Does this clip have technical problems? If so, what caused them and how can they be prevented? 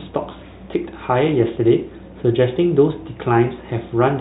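No, there are no technical problems to prevent here.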